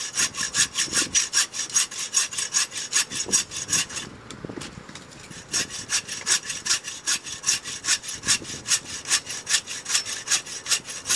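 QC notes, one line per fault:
throughout: wrong sample rate. Everything runs 1.5 times too fast and sits about 7 semitones (a fifth) too high, with tempo and pitch rising together. That locked ratio fits material recorded at 16 kHz being played at 24 kHz without conversion. On a spectrogram every harmonic and formant band sits 1.5 times higher than it should, and the upper band edge lands at 12 kHz instead of 8 kHz. The waveform's envelopes and gaps are squeezed to two thirds of their true length.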